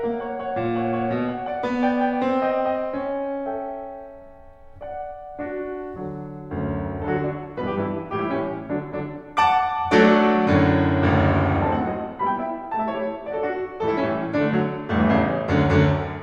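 No faults detected anywhere in this music clip.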